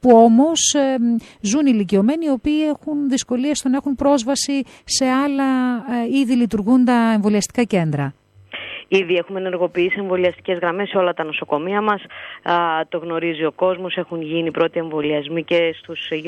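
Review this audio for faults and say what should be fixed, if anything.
No faults turned up in this audio, so nothing needs to be fixed.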